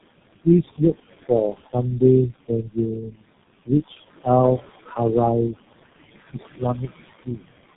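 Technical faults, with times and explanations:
throughout, noise suppressor artifacts: The steady background is pulled down by about 19 dB in the gaps, then rises again under the speech.
throughout, tandem speech coding: The speech passed through three low-rate speech codecs in a row, and each one re-encoded the previous one's errors. The result is rough, muffled and warbly, with nothing above 3.8 kHz. The final coding stage fits G.723.1.
4.84 to 4.98 s and 6.57 to 7.41 s, speech cut by the noise suppressor: The suppressor mistook speech for noise and turned it down with the room noise, which sits about 13 dB below the speech. The first dip removes roughly 150 ms, reaching about 15 dB. The later one affects around 400 ms, reaching about 18 dB, so the sound there comes out swallowed and faint.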